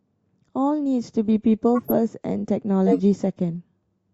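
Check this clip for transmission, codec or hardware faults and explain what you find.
Two codec faults are present, both corrupt frames decoded. At 1.75–1.91 s and 2.86–3.00 s, damaged compressed frames were played anyway, misplacing spectral energy into short noisy chirps; the second is louder.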